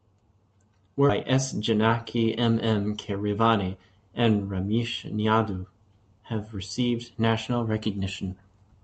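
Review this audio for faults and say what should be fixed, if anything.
Skip ahead at 1.09–1.11 s: about 0.4 s of speech is lost and the two edges join directly, with no silent gap like a dropout would leave. Fix it with a larger jitter buffer that does not overflow and discard queued audio when delayed packets arrive in a burst.

Jitter buffer speed-up from 1.23 to 3.32 s: speech runs at 110% speed with unchanged pitch as roughly 0.2 s is trimmed in pitch-period slices, unlike resampling, which would raise pitch. Fix it by reducing network delay bursts so the buffer rarely overfills, or by letting it drain more gradually.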